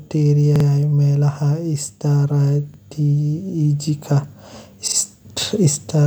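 At 0.56 to 0.65 s, 2.74 to 2.79 s and 4.88 to 4.97 s the speech stutters from a repeated buffer: fresh audio arrived late, so the device replayed its last block of about 46 ms, which fits a 2048-sample buffer. The first and third events repeat twice, the second once, each with a hard join. Unlike a dropout, nothing goes silent and essentially no audio is lost; the speech simply stalls on an identical fragment before resuming.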